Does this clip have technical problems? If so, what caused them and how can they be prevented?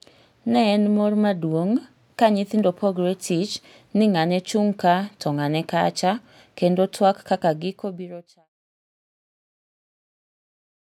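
No, this clip has no technical problems, and the smooth fade out that ends at 8.5 s is a deliberate edit rather than a fault.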